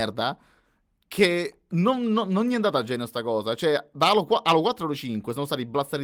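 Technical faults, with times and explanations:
No technical faults are audible in this speech.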